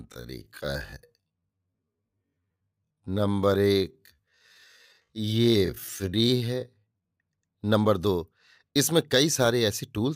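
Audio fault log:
0.0–7.1 s, time-stretched section: speech plays at 0.54 times normal pace with pitch unchanged, so it drags as short pieces repeat, then jumps to normal pace at 7.1 s; likely software stretching this part to fill a longer duration.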